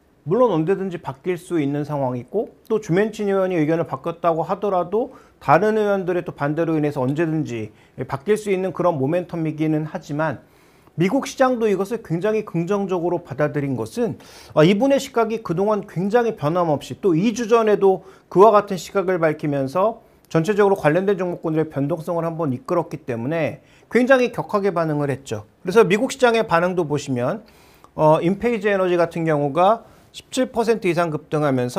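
No technical faults are audible anywhere in the clip.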